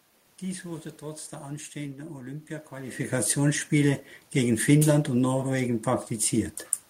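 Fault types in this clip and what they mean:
There are no fault types in this clip.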